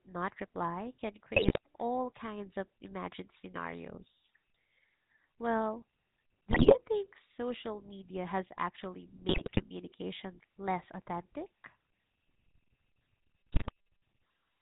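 Throughout, the speech has the buzzy, gravelly roughness of the GSM full-rate codec, with nothing above 4 kHz, which fits a 13 kbps stream. Sparse pulse excitation through a vocal-tract model causes that grit, unlike the smeary, watery swirl of a low-bitrate transform codec.

GSM bit errors break in at 1.36 to 1.58 s, after "not reply can" and before "all kinds of imagined"; at 6.50 to 6.80 s, before "think social media has"; at 9.28 to 9.63 s, after "social media has actually"; and at 13.52 to 13.71 s. Corrupted filter, pitch and gain values make the decoder squawk, pop and gargle, unlike the silent gaps of dropped packets.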